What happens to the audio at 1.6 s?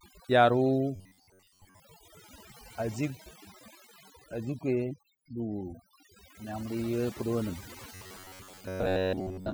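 At 1.6 s the speech is inside a stretch of robotic sound from repeated short buffers, running from 0.96 to 1.80 s. It turns into a rigid metallic buzz at about 93.8 Hz. The likely cause is a playback path looping the last fragment of about 10.7 ms while most of the real audio is skipped. On a waveform this shows as a short, identical shape repeating. A spectrogram shows evenly spaced harmonic lines locked to 93.8 Hz.

Overdone noise removal also affects this moment, as it does the whole clip. Bands near the noise floor are pushed almost to silence, so the background breaks up into twinkling specks. A spectrogram shows a blank background scattered with isolated bright dots, and the speech has ragged, missing edges.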